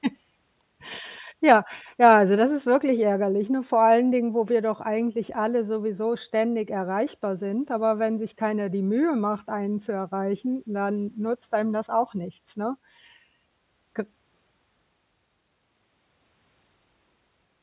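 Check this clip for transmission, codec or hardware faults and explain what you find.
No faults detected in this clip.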